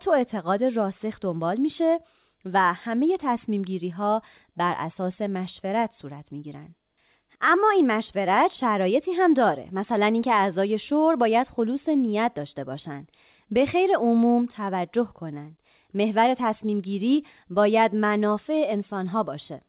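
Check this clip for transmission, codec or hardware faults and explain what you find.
No transmission, codec or hardware faults can be heard in this speech. It passed through a WebRTC call path whose narrow telephone band, with nothing above 4 kHz, fits a G.711 mu-law codec working as designed.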